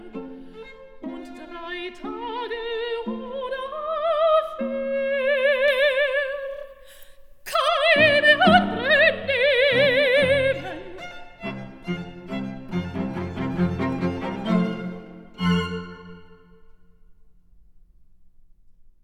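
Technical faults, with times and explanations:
5.68–7.68 s: pre-emphasis left on. The treble was lifted for transmission and never cut back. The curve fits FM 75 µs. At 10 kHz the boost is about 13 dB over 1 kHz. The sound turns thin, bright and hissy with sibilance.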